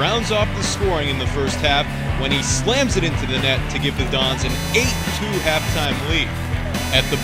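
From 4.49 s to the end of the clip, computer activity noise appears: a buzzing, chirping texture pulsing at roughly 500 Hz, sitting only about 15 dB below the wanted sound. Its rhythm is unrelated to the audio, which points to load changes in the host machine's processor, graphics or peripherals modulating the ground shared with the audio circuitry, so the interference rides in on the supply rather than the signal.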